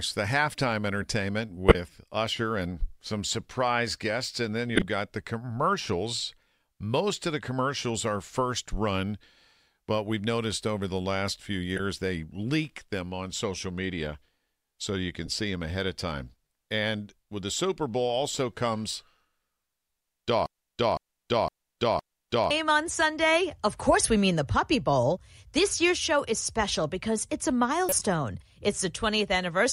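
At 1.69 to 1.75 s the speech is broken by a short squeaky blip, the first of several corrupt frames decoded. Flipped bits inside a few compressed frames were played anyway, so misread gains and codes put energy at frequencies that don't belong there. A longer burst follows at 4.70 to 4.85 s, just before "got the commercials". Then come brief chirps at 11.77 to 11.80 s, between "over the last few" and "they leak them on", and at 15.26 to 15.28 s, between "social media so you" and "see them ahead of". On a spectrogram each shows as a narrow vertical block of misplaced energy with hard edges. In the waveform it is a sudden jump in amplitude at the boundaries of the damaged frames.

From 20.46 to 22.51 s a broken-record loop takes over. A 511 ms fragment repeats exactly, back to back, four times, and the speech that should have filled those two seconds is lost. The likely cause is a stalled player, encoder or stream that kept resending the last piece it held. 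The spectrogram shows the same pattern tiled identically every 0.51 s. The waveform has abrupt seams where each copy restarts.

One more corrupt frame decoded appears at 27.89 to 28.03 s, a burst spread over several frames. It has the same misplaced-energy smear and edges as the earlier ones.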